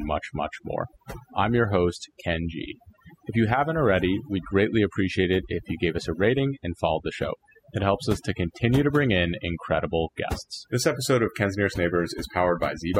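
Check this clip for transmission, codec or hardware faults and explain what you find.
The fault present is overdone noise removal, a processing problem rather than a transmission or hardware one. Throughout the speech, a noise reducer set too aggressively mutes individual frequency bands that sit near its noise estimate, taking low-level speech detail with them. The background drops and breaks up into twinkling, warbling specks.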